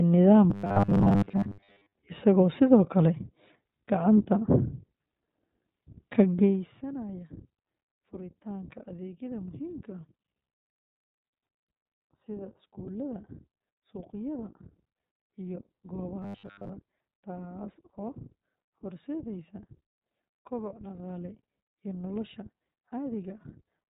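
The whole recording carries the sound of the iLBC codec. Nothing above 4 kHz survives. The speech is clear but rough and slightly synthetic. Each short frame is coded on its own, which fits the 15.2 kbps mode with 20 ms frames.

From 0.50 to 1.92 s, and again from 16.22 to 16.70 s, the speech turns into robotic sound from repeated short buffers. A rigid metallic buzz at 100 Hz sets in. This is likely caused by a 10 ms buffer being replayed while most of the real audio is skipped.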